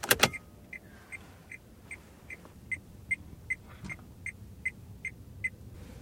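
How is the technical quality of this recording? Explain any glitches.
No audible glitches or faults.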